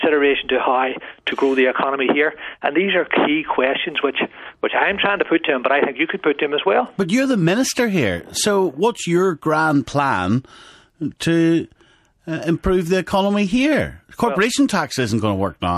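At 11.18 to 11.20 s there is pre-echo. The transform codec seems never to switch to short blocks, so quantisation noise across its 36 ms window is spread about 22 ms ahead of a sharp attack. A hiss about 13 dB above the quiet gap precedes the attack, which sounds smeared.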